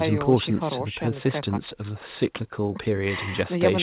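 There are no technical faults to describe in this speech clip.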